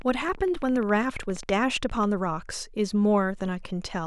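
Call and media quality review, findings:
Train of clicks, 0.02 to 2.05 s. Likely cause: periodic interference pulses from nearby equipment or a struggling interface. Regular ticking at 14.9 clicks per second, around 30 in total, each roughly as loud as the speech. Audible over speech and in the gaps between words.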